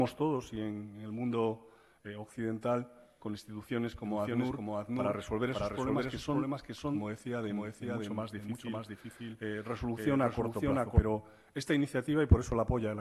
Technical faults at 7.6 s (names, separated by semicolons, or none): doubled audio track